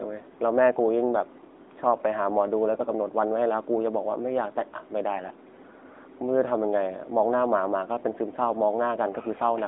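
From start to finish the speech passes through an AMR narrowband mobile codec. Energy is confined to roughly 250 Hz to 3.6 kHz, with nothing above 3.7 kHz. Plainly audible buzzy, synthetic coloration from pulse-driven vocal-tract modelling fits a 10.2 kbps AMR-NB mode.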